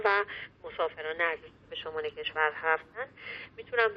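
No technical faults occur at any point in the audio.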